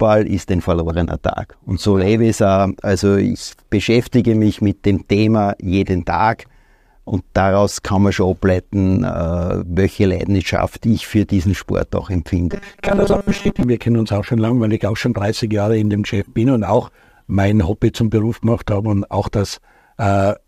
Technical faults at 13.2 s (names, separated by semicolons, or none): robotic sound from repeated short buffers